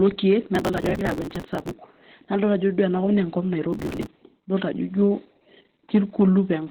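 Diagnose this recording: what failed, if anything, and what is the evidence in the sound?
The speech sounds muffled, hoarse and faintly robotic throughout, with nothing above about 4.3 kHz. This is the codec stage: Opus voice compression in its SILK narrowband mode, consistent with a rate near 8 kbps, which cuts the band and codes the excitation coarsely.

From 0.55 to 1.73 s, and again from 3.73 to 4.07 s, a gritty crackle tears across the sound. This is processor overload crackle at the driver or buffer stage. Buffers of a few milliseconds repeatedly missed their deadlines and were skipped, each leaving a hard-edged gap.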